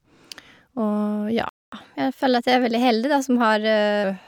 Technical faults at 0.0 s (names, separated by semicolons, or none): none